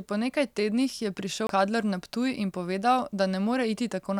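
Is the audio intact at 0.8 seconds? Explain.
Yes, the speech at 0.8 seconds is intact, with no dropout, click, distortion or other fault at that point.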